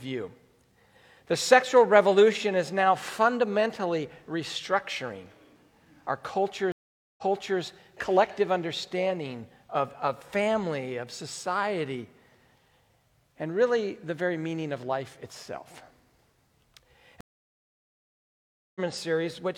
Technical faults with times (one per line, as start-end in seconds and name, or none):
6.72-7.61 stream reconnect
17.21-18.80 stream reconnect